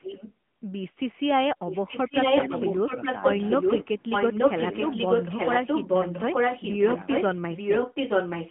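AMR narrowband mobile codec damage runs through this whole speech recording. The line is confined to roughly 150 Hz to 3.4 kHz with nothing above 3.8 kHz, and the plainly buzzy, synthetic texture points to a mid-rate AMR-NB mode, consistent with about 10.2 kbps. The pulse-driven vocal-tract model cannot fully rebuild the voice at that bit budget. An echo leak appears from 1.66 to 3.86 s and again from 7.56 s to the end. A copy of the speech returns 0.88 s later at about the same loudness as the original, likely because a far-end loudspeaker's sound reached its microphone and the echo canceller failed to remove it.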